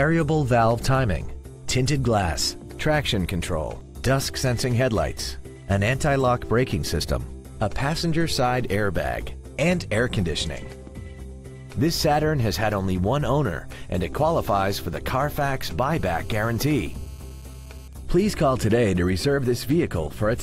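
From 15.99 to 17.88 s a GSM phone buzz cuts in. A nearby 2G phone in a call pulses its radio at 216.7 Hz. The audio circuit rectifies those pulses. The result is a hard, raspy, harmonic-rich buzz, about 29 dB below the signal.

At 17.93 s the steady buzz gives way to GSM signalling bursts, lasting until 19.25 s. The phone is still in the call, but its user has gone quiet, so it transmits only short groups. These are heard as even ticks with a longer 216.7 Hz buzz twice a second, roughly 35 dB down.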